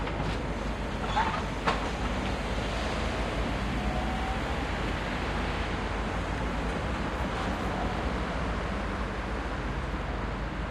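From start to finish there's mains hum sitting under everything, a steady 50 Hz drone with a few low harmonics, barely quieter than the sound itself. Something, a ground loop or a nearby transformer, let the power line leak into the signal.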